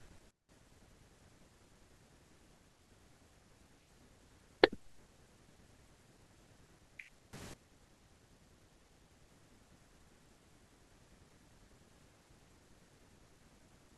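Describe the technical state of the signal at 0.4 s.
At 0.4 s the speech sits inside a sudden gain jump that runs from 0.31 to 0.49 s: the level falls by about 19 dB in a single step and returns just as abruptly. The cause is likely a gain setting applied with no ramp. What separates it from a fade or compressor ducking is the instant edge, and unlike a dropout, the sound and its background noise stay audible, only quieter, together.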